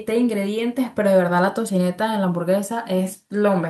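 No technical faults can be heard anywhere in the speech recording.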